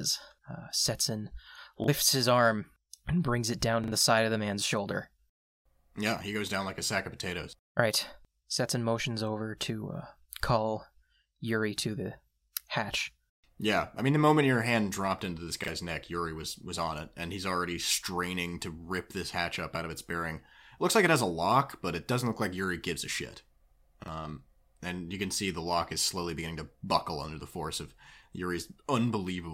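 Repeated buffers occur at 1.84–1.88 s, just before "his arm and brings"; at 3.84–3.92 s, between "and brings it down" and "the side of the"; at 15.64–15.68 s, after "hand dropped into this"; and at 24.04–24.08 s. Each time, fresh audio failed to arrive and the last chunk of speech was replayed. The repeated chunk is about 40 ms long, which points to a 40 ms buffer. It plays once more, or twice more at 3.84 s, with hard joins that make a quick stutter. A similar span of real speech goes missing, roughly 40 ms at most events and roughly 70 ms at the second.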